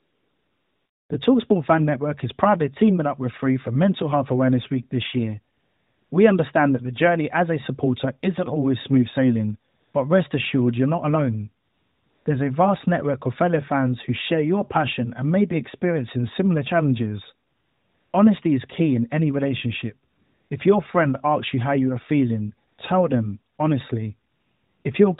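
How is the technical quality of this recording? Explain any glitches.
The pauses carry AMR comfort noise: each gap between phrases loses its real background and is filled with a smooth, steady hiss that switches in and out, from the opening 1.1 s through to 24.8 s, with gaps from 40 ms to about 0.7 s, such as the one after "isn't always smooth sailing" and before "but rest assured you're". The phone judged these moments silent and stopped sending speech frames, so the receiving end synthesised noise from a rough sketch of the background's level and spectrum. The speech itself has the band-limited, slightly processed sound of the AMR narrowband mobile codec, with nothing above 4 kHz, and its light coloration points to a high bitrate around 12.2 kbps.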